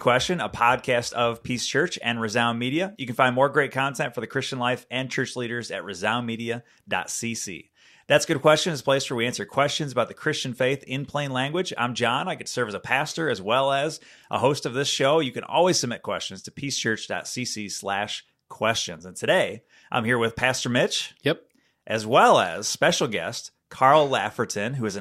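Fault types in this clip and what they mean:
No faults can be heard anywhere in this audio.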